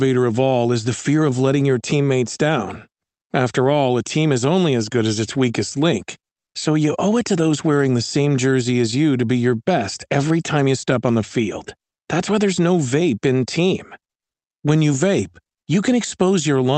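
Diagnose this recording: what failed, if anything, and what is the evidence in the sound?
Nothing failed in this recording; the speech comes through the Opus call path as expected, with its top end stopping around 8 kHz.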